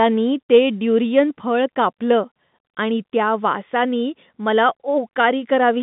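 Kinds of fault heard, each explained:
No faults can be heard in this speech clip. It sits on a G.711 mu-law telephone path: the sound is confined to a band of roughly 150 Hz to 3.7 kHz, with nothing above about 3.8 kHz, which fits a 64 kbps line.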